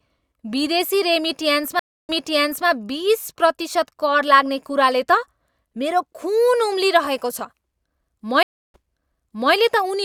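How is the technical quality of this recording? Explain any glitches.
The recording has two stream reconnect faults, both in the speech. At 1.79 to 2.67 s the audio drops to about 0.3 s of silence, then resumes 0.58 s earlier than where it stopped, so a stretch of speech repeats. At 8.43 to 9.54 s the same happens, with 0.31 s of silence and a 0.8 s jump back. Each time the connection broke and the player restarted its decoder mid-stream, and the server resent a burst of already-played audio, producing a gap followed by a brief replay.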